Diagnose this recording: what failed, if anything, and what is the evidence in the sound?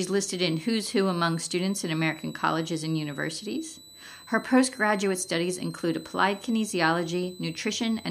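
A thin, steady high whistle sits under the sound from start to finish, wandering between about 3.9 and 4.2 kHz rather than holding one pitch, and riding roughly 25 dB below the programme. This is switching supply whistle, an analogue-stage fault: a switch-mode power supply has dropped into an audible burst mode or is beating with another supply, and its switching frequency, shifting with load, couples into the audio wiring or ground as a drifting tone near 4 kHz.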